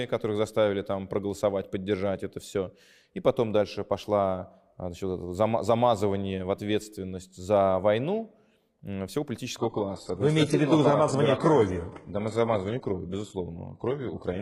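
From 9.58 s to the end of the audio at 14.42 s, an adaptive stream at a lower bitrate takes over. The treble suddenly vanishes above about 11.5 kHz. That fits a switch from a roughly 96 kbit/s AAC rendition to a heavily compressed HE-AAC one near 12 kbit/s. There is no gap or stutter at the change, which distinguishes it from a dropout or packet loss.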